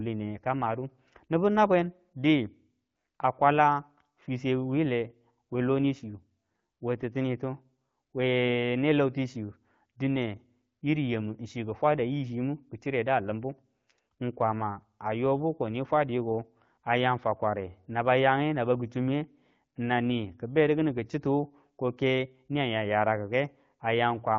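No technical faults are present: the speech passes through an AMR wideband (HD Voice) link at 12.65 kbit/s, the rate at which that codec operates as designed, and its band-limited coding to about 7 kHz leaves only light codec character rather than any defect.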